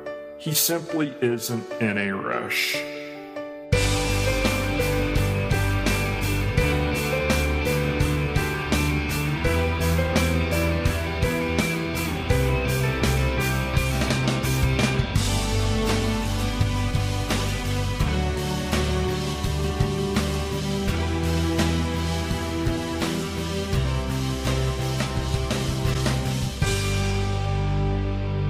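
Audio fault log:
25.93–25.96 s, repeated frames: a single block of about 26.1 ms plays once more right after itself, so you get a tiny stutter. That block length fits one compressed frame being written or sent twice, and the extra play makes the audio about 26.1 ms longer than it should be.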